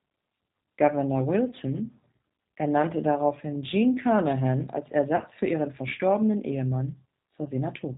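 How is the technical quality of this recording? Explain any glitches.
The technical quality is limited. The whole clip passes through the G.729 codec at 8 kbit/s, and three short dropouts are patched over by packet loss concealment.

The G.729 codec damage is plainly audible throughout. It models speech as a vocal tract filter plus a pitch predictor and a few pulses per frame. Nothing above 4 kHz survives. The voice sounds narrowband, slightly rough and synthetic. Consonants lose their crispness.

VoIP packet loss concealed by the speech codec occurs three times: 1.50 to 1.53 s, 5.16 to 5.20 s, and 7.44 to 7.49 s. Each gap spans about 20 ms, which fits one lost packet. The decoder fills the hole by extending its last pitch and filter at falling gain. This gives a brief stretched, smeared patch that fades. The voice stays weak or distorted just after each gap, as at the one right before "für ihren verstorbenen".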